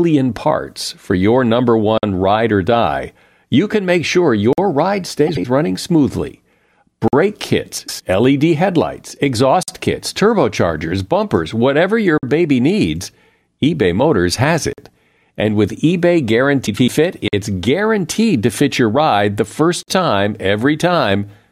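From 1.98 s to 19.83 s, eight silences of 50 ms recur every 2.5 s, including one just before "baby needs" at 12.18 s and one before "guaranteed to fit your" at 17.28 s. This is a gap between chunks: silence is inserted at each 2.5 s chunk boundary, so nothing is lost, but the sound is cut at every join.

Frames out of order appear at 5.27 s, just before "running smoothly", and at 7.78 s and 16.66 s, each lasting about 0.18 to 0.23 s. Adjacent blocks of about 78 ms and 105 ms play swapped, which fits runs of three and four frames, producing a garbled flutter but no lost time.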